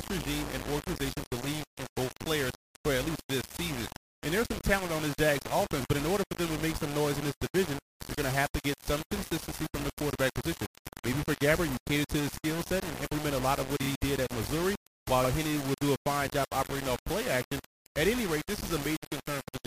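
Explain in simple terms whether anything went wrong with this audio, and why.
The whole clip sounds rough and grainy. The graininess changes as the sound changes, and the quietest moments crackle or break up instead of fading smoothly. The likely cause is low bit depth without dither. The sound seems to have been stored with very few loudness steps, about 4 bits' worth. Each moment was rounded to the nearest step, so the rounding error follows the sound and comes out as gritty distortion.

There are also two short stutters caused by repeated frames. At 13.82 to 13.88 seconds, a tiny slice about 19 ms long plays twice more. That adds 58 ms. At 15.24 to 15.28 seconds, a slice about 46 ms long plays once more. Each time, the player got the same chunk of compressed audio again and played it again. You hear a quick hiccup where the audio repeats.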